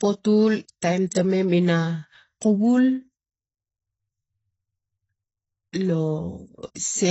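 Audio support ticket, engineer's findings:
Dull, swirly speech throughout, nothing above 7.9 kHz; spectrogram shows a hard shelf there. Likely AAC compression, its low-bitrate quantisation dropping bands.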